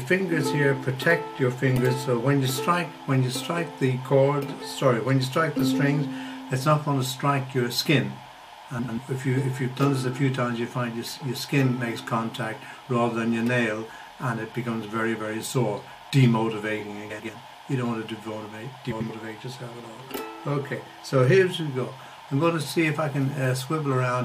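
Frames out of order at 8.79 to 8.99 s, 17.10 to 17.30 s and 18.91 to 19.10 s. In each stretch two neighbouring runs of frames were decoded in swapped order, so a roughly 0.2 s span plays its second half before its first, which fits two blocks of about 93 ms exchanged. It sounds like a brief garbled flutter. Unlike a dropout or a skip, nothing is missing and nothing repeats, and the timing after each event stays intact.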